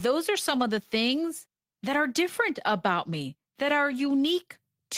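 Speech recording, and nothing technically wrong can be heard in it. There are no events to place in time and no causes to point to.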